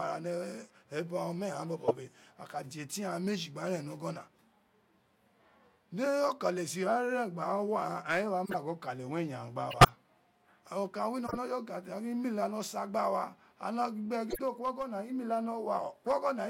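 At 1.87 to 1.92 s, 8.45 to 8.56 s, 9.71 to 9.89 s, 11.26 to 11.37 s and 14.30 to 14.39 s the speech carries short chirps and noise bursts typical of a corrupt frame decoded. Flipped bits in each compressed frame gave wrong gains and misread codes, so energy landed at the wrong frequencies for a few frames at a time. The loudest, at 9.71 s, peaks near about -10 dBFS; the quietest, at 14.30 s, stays far lower.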